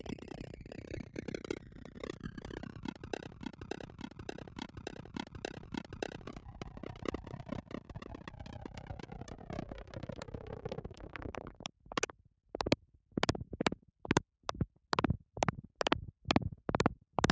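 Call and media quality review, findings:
Noise suppressor applied to music or sounds, whole clip: speech-tuned suppression left active treats steady content and tails as noise, so level swings by about 15 dB. Attacks pass, sustained parts and decays sink, giving pumping and thinning throughout.

Broken-record loop, 3.34 to 6.27 s: likely a stalled player or stream re-sending its last buffered fragment. A 578 ms piece repeats five times back to back; the audio due in that span is lost.

Sound cut by the noise suppressor, at 3.87 to 4.24 s, 4.48 to 4.81 s, 7.62 to 7.90 s and 11.68 to 11.87 s: the suppressor misclassifies these sounds as noise. They dip by about 5 to 6 dB for about 150 to 300 ms. Call mic band-limiting to 8 kHz is present.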